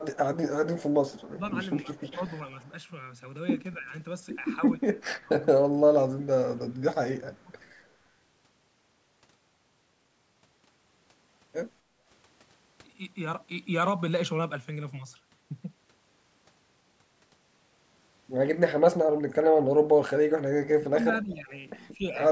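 A speech recording with call-path faults. From 0.11 to 2.68 s, a faint delayed copy of the speech trails it by 261 ms, sitting roughly 30 dB down. This is an echo leak, likely a loudspeaker echo that the far end's canceller failed to remove. A briefer, quieter scrap returns from 7.61 to 7.69 s, about 40 dB down, at the same 261 ms delay. Speech suppressed in double talk appears three times. The speech dips in pieces from 1.31 to 2.22 s, by around 10 dB for about a third of a second in total. From 3.78 to 7.51 s it drops by around 20 dB for roughly two seconds in total. From 19.02 to 22.05 s it falls by as much as 30 dB, again for about two seconds in total. The likely cause is a canceller that could not separate the talker from overlapping echo and turned both down. From 11.82 to 12.01 s, the room sound dips by about 7 dB for a moment and then recovers. This is background gated by the echo canceller, which clamped the microphone while the loudspeaker played.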